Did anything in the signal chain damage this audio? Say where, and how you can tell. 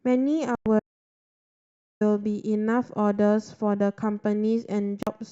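Yes. Bluetooth stalls at 0.55 to 0.66 s and 5.03 to 5.07 s: the speech cuts to silence for 106 ms and then 41 ms, then resumes. This points to the playback stage, likely radio interference delaying packets until the headphone buffer ran empty.

Audio dropout to silence from 0.80 to 2.01 s: 1.21 s of silence with no room tone, and the speech returns mid-flow with that stretch missing. This places the fault at capture or encoding, likely a lost input link while the recorder kept writing silence.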